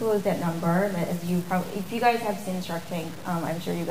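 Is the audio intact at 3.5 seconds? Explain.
No, it isn't. At 3.5 seconds, like everywhere else in the clip, there's a gritty, grainy distortion that shifts with the sound, sitting only about 20 dB below it. That's the signature of low bit depth without dither, likely a reduction to around 6 bits with plain truncation. With no dither, the rounding error tracks the signal itself, so you get a rough crunch that thickens on quieter passages.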